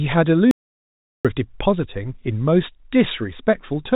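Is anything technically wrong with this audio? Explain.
Yes. From 0.51 s to 1.25 s the speech drops out completely, an audio dropout to silence lasting about 0.74 s. The input likely stopped reaching the recorder, which kept writing silence rather than pausing. The speech is cut off abruptly, then resumes mid-flow, and the gap between is dead digital silence with no room tone at all, so whatever was spoken there is lost. The telephone-band coding, with nothing above 3.8 kHz, is the expected narrow sound of that format, not a fault.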